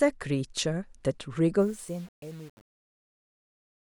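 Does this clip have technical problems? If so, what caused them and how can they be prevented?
Yes. From 1.6 s to the end at 4 s the speech shows truncation distortion on a fade. The fade-out starts around 1.6 s. The level drops, and the signal is cut down to about 7 bits with no dither. Low-level detail collapses into coarse square steps. The tail turns gritty. To prevent this, keep full resolution through the fade and add dither when reducing word length.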